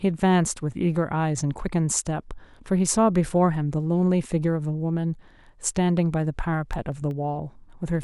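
From 6.54 to 7.11 s, the speech carries CD scratch ticks. Four tiny clicks arrive about seven times a second, once per disc turn. A scratch spoiled more data than error correction could rebuild, so the player patched or muted each gap, the longest under a millisecond.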